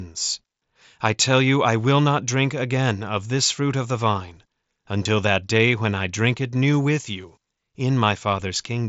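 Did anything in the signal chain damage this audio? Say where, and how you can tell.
Yes, concealed Bluetooth headset packet loss on the headset link: a brief buzzy blip at 5.04 s, where roughly 15 ms went missing and the receiver repeated recent waveform to fill the gap.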